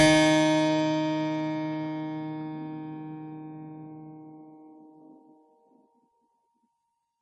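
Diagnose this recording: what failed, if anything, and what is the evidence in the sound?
MP3 compression throughout, likely at the codec stage: the music is cut off above 11.2 kHz and sounds heavily watery, consistent with a low bitrate around 32 kbps starving weak frequency lines.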